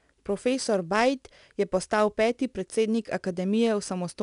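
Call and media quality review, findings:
Gritty hiss riding on louder speech, roughening sharp onsets, throughout; nothing above 10.6 kHz. Likely 4-bit ADPCM compression: coarse adaptive steps, rate consistent with about 89 kbps, fitting a 22 kHz sample rate.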